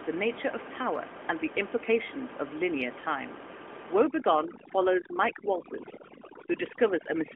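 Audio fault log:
4.06 s to end: overdone noise removal. Noise reduction set too strong drops single frequency bands whenever they approach its noise estimate, so room noise about 10 dB below the speech breaks into twinkling, warbling specks, and quiet speech components vanish too.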